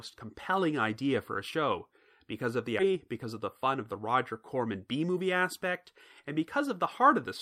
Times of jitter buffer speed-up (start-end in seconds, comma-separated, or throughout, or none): 2.89-5.26